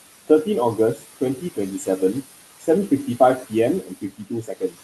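Throughout, the room noise, sitting about 13 dB below the speech, sinks between phrases and swells back underneath them. These are noise suppressor artifacts: bands judged to be steady noise are pushed down about 15 dB, frame by frame.

From 0.95 to 1.17 s and 1.36 to 1.58 s, brief stretches of speech turn faint, by about 17 dB and about 15 dB. From 3.83 to 4.77 s, scattered parts drop about 18 dB. This is speech cut by the noise suppressor, which mistook quiet speech for background.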